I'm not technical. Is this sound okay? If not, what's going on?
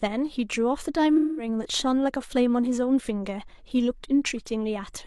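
No. From 1.16 to 1.48 s the speech turns smeared and hazy. That is AAC frame loss with concealment: a short run of audio data went missing, and the player patched the gap by reusing the last good sound.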